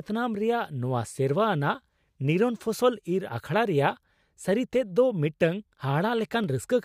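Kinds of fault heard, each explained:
Clock drift buffer slips: The likely cause is two devices running on separate clocks that disagree by around 200 ppm, so the buffer between them drifts until it drops or repeats a small block of roughly 15 samples. In this speech the slip is heard as a brief click about every 1.71 s, about four times between 1.29 s and 6.44 s, starting just after "ᱨᱮᱭᱟᱜ ᱱᱚᱶᱟ".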